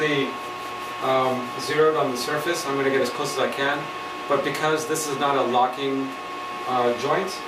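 No technical faults can be heard anywhere in the audio, and the signal stays steady and intact throughout.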